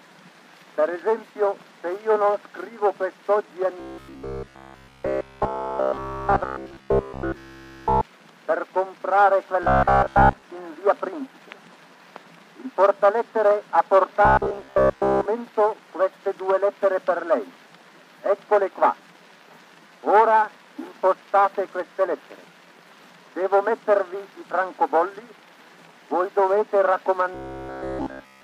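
Audio likely arrived too seldom, so playback repeated roughly 15 ms buffers, causing robotic sound from repeated short buffers at 3.80–8.03 s, 9.63–10.43 s, 14.25–15.26 s and 27.34–28.44 s: a rigid metallic buzz at 66.7 Hz, fully repeated in the first and last spans, mostly in the middle two.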